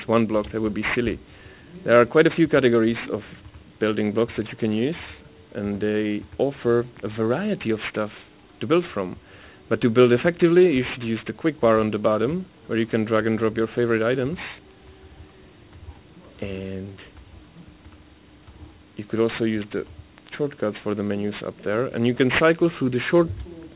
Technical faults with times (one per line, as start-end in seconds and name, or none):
0.00-23.75 aliasing